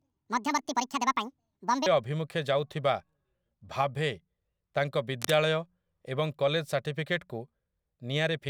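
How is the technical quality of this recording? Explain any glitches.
The recording has two clear technical faults: an opening section played at the wrong speed, and a brief burst of cable scratch noise later on.

From 0.00 to 1.86 s, the speech sounds high, squeaky and hurried, raised by roughly ten semitones, until normal pace returns just before "ଅଭିମୁଖେ ଯାଉଥିବା". This is a section at the wrong speed, running 1.73 times too fast. The likely cause is that this stretch was played or edited against the wrong clock. Because speed and pitch are tied together, the voice shifts upward along with the tempo.

From 5.19 to 5.34 s, a short, dense, uneven rustle sits over the speech, about 10 dB below it. This is cable scratch noise. It likely comes from a worn cable, connector or control being moved. That movement makes the contact resistance fluctuate rapidly, and those fluctuations add a quick spray of scratchy noise for this fraction of a second.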